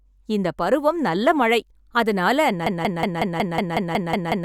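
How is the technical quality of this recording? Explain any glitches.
One serious glitch spoils the end. From 2.66 s to the end, a 184 ms fragment of speech repeats ten times in a stuttering broken-record loop. The likely cause is a stalled player or stream resending the last piece it held, so the speech meant for that stretch is lost.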